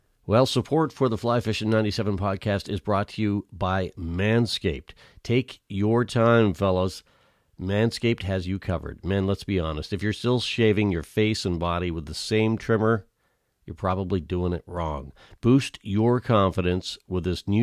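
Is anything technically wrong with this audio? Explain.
No, nothing technical stands out here; the speech comes through without any problems worth pointing to.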